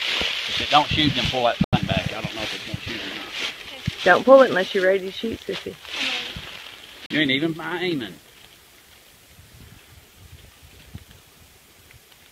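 At 1.64 s and again at 7.06 s, the receiver lost the digital stream or rejected corrupt frames and muted until clean data resumed: a digital broadcast dropout. The first hole runs to 1.79 s, with about 85 ms of programme missing, which fits two lost frames. The second ends at 7.15 s, about 43 ms gone, consistent with a single frame. Each drops to silence, with the sound resuming further along rather than where it stopped.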